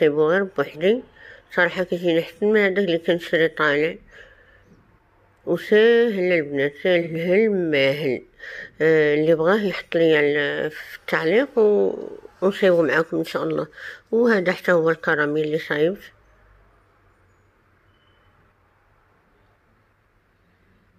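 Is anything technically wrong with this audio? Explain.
Yes. At 7.01 to 7.08 s there is AAC frame loss with concealment. A gap of about 43 ms, which fits one missing AAC frame, was filled from the previous spectrum. It sounds like a brief smeared, noisy patch and shows as a blurred vertical band on a spectrogram.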